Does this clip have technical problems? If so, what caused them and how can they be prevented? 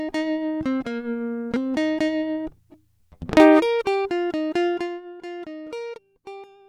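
Yes. Zipper noise runs from 4.66 to 5.04 s: a roughly 15 dB level drop applied in about a hundred unsmoothed steps per second, each step ticking audibly over the music. Prevent it by interpolating gain changes per sample or with a short ramp instead of stepping per buffer.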